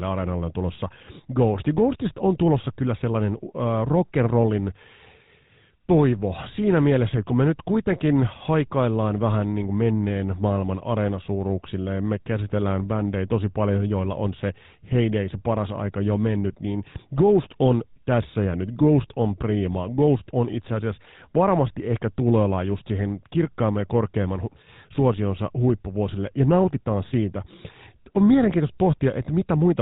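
From start to finish, the speech carries GSM full-rate codec damage, and it is plainly audible. The codec models the vocal tract and drives it with sparse, regular pulses. Nothing above 4 kHz survives. The result sounds buzzy and gravelly, which fits a 13 kbps stream.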